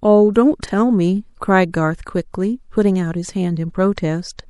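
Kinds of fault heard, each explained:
MP3 compression: Throughout, the speech sounds watery and swirly, with dulled treble and metallic chirps on s sounds. This is likely lossy MP3 coding at a bitrate that points to about 64 kbps, where the encoder cuts high frequencies and lets weak spectral detail flicker between frames.
Frames out of order: From 0.65 to 0.71 s a brief garbled flutter interrupts the speech. Two adjacent blocks of about 26 ms each, which fits single MP3 frames, play in swapped order, so the sound there jumps back and forth while no time is lost.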